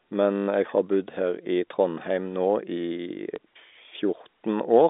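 Speech over what sounds like a narrowband G.711 phone line, with packet loss and the last packet repeated at 0.36 to 0.48 s (120 ms, which fits six lost 20 ms packets) and again briefly at 3.36 to 3.38 s. The receiver replays the last chunk, so the first gap buzzes at about 50 Hz and sounds like a short robotic stutter, while the second is just a small blip.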